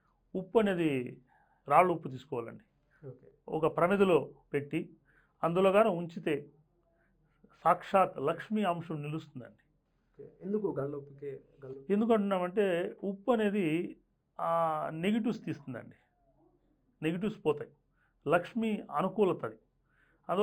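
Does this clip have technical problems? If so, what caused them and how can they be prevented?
Yes, there's imaging from linear upsampling through the whole clip. The top end sounds dulled, with a faint metallic shimmer between 5.5 and 11 kHz, well below the main signal. That points to an 11 kHz source raised to 48 kHz by straight-line interpolation, which leaves mirror copies of the spectrum. To avoid it, resample with a proper windowed-sinc or polyphase filter.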